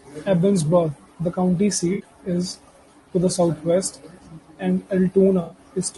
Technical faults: low-delay AAC compression; AAC frame loss with concealment

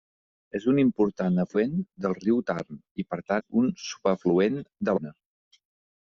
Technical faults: compressed frames skipped

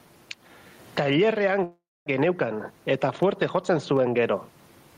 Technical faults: gain pumping; call audio freeze

